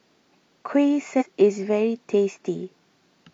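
At 1.16 to 1.23 s, damaged data in a compressed stream corrupts a short run of frames; the decoder misreads them, loses sync and hunts for the next valid header. For about 70 ms the speech is broken by a brief decoding glitch.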